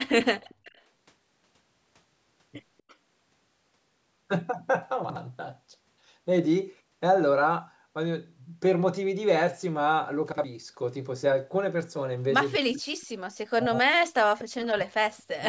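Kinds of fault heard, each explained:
Speech suppressed in double talk: at 0.02 to 0.14 s, 12.58 to 12.83 s and 13.41 to 15.46 s the speech drops away, at its deepest by about 40 dB. This is likely an echo canceller mistaking simultaneous talk for loudspeaker echo and turning everything down.
Echo leak: at 0.49 to 0.82 s, 2.78 to 2.93 s and 13.01 to 13.06 s a faint copy of the speech trails it by 260 ms, well below the main level. This is likely loudspeaker pickup that the far end's echo canceller left unremoved.
Chunks out of order: at 5.04 to 5.16 s and 10.32 to 10.44 s a 60 ms piece of audio plays one slot late, after the piece that should follow it. Nothing is missing, but the swapped order gives a brief jumbled moment.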